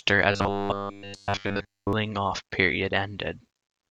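Speech, and from 0.32 to 1.93 s it goes robotic: a rigid metallic buzz at 100 Hz, a 10 ms repeat, replaces essentially all the real audio while loosely tracking the words. That's likely robotic sound from repeated short buffers, with the player looping a tiny chunk while starved.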